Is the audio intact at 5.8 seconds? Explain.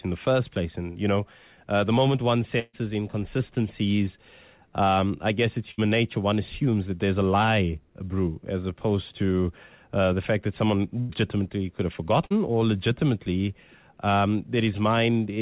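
No. A burst of packet loss spans 5.71 to 5.80 s. The receiver stretches the last sound for about 65 ms, then skips ahead, losing about 60 ms.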